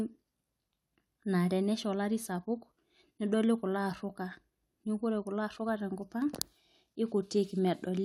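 Speech recording with no audible technical faults.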